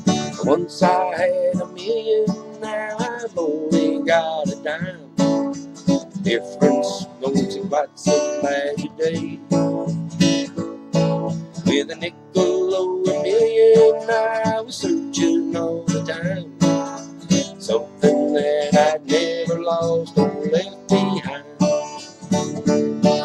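No technical faults can be heard anywhere in the audio.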